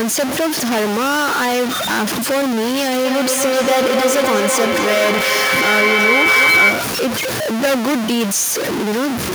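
A data bit in the converter or its line is likely stuck at a fixed value throughout the recording. About half the samples land off by that bit's weight, so the speech carries stuck-bit distortion from start to finish, and the pauses fill with noise.

From 3.05 to 7.1 s, two devices on the same call in one room form a loop that gains level on each round trip, producing feedback howl. The repeats, about 0.3 s apart, grow rather than fade and narrow to a tone around 2 kHz. At its peak it is about 4 dB louder than the speech.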